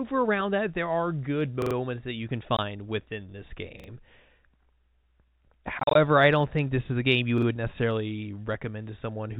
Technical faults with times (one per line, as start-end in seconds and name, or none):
1.62-1.75 repeated buffer
2.57-2.59 packet loss filled with silence
3.80-3.88 repeated buffer
5.79-5.95 packet loss filled with silence
7.38-7.47 repeated buffer